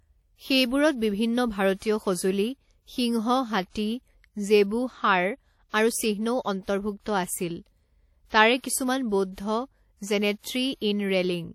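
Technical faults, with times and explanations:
Throughout, WMA compression: ringing, washy speech with signal-following hiss and nothing above 17 kHz, likely from long-block transform coding at a bitrate fitting 48 kbps.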